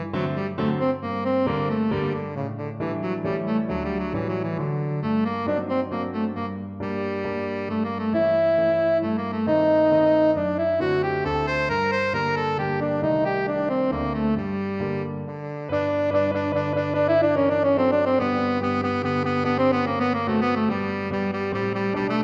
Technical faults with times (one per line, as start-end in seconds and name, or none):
none